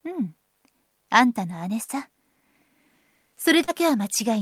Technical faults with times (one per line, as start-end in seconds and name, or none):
1.83-1.91 burst of packet loss
3.64-3.70 short concealed packet loss